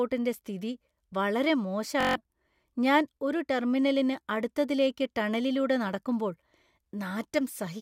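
A speech clip with a steady buzz at about 47 Hz from 2.01 to 2.16 s, right after "സ്ഥിതി വളരെ". This is a system hang loop: one 21 ms fragment, consistent with a 1024-sample buffer, repeats seven times while the system stalls, and about 150 ms of audio is lost.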